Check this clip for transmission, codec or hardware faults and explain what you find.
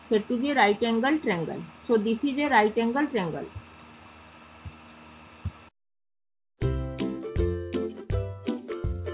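I find no transmission, codec or hardware faults in this clip; the call path's narrow band, with nothing above 4 kHz, is normal for it.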